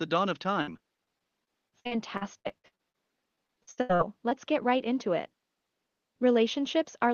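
From 0.61 to 2.96 s and again from 3.36 to 4.33 s the speech breaks up with repeated packet loss, giving a robotic sound. Seventeen and then eight brief holes appear, the longest about 59 ms and 77 ms, each papered over by stretching the preceding sound. Roughly a quarter of each stretch is concealed audio. On a spectrogram this shows as smeared, repeated harmonic blocks with abrupt edges. The faint room noise, about 55 dB below the speech, sits underneath.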